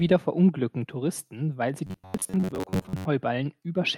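Right after "weil sie", from 1.87 s to 3.05 s, the speech turns into robotic sound from repeated short buffers: a rigid, metallic buzz at 93.8 Hz. It likely comes from audio arriving too seldom, so that a roughly 10.7 ms block replays for most of that stretch.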